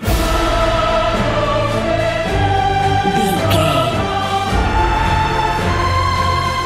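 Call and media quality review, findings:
No audible faults found; nothing to action on this one.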